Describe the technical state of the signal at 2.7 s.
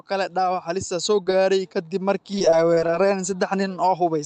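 At 2.7 s the speech is inside a run of repeated packet loss (robotic sound), 2.38 to 2.96 s. Five gaps, the longest 24 ms, are filled by extending the preceding sound, so it turns choppy, with pieces missing. The waveform shows brief repeated cycles, and the spectrogram shows briefly held, unchanging harmonics.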